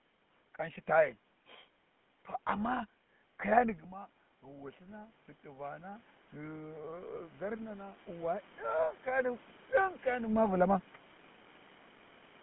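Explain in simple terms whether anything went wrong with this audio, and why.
GSM full-rate codec, throughout the whole clip: the speech passed through the original GSM mobile-phone codec. It doesn't send the sound itself. It sends a rough model of the talker's throat and mouth, driven by a thinned-out train of regular pulses. Rebuilding speech from that leaves the voice plainly buzzy and gravelly, and it sounds muffled because nothing above about 3.8 kHz gets through, so the crisp, airy part of the voice is missing.

Automatic gain rising, from 3.91 to 8.52 s: the sound got quieter just before this, around 3.5 s, much as if the talker leaned away from the microphone. The phone's automatic volume control noticed the weaker input and slowly turned itself up over those four and a half seconds. Because it raises everything together, the voice and the room's background noise swell up at the same time. 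The volume has finished rising by the time the talker seems to move again near 9.0 s.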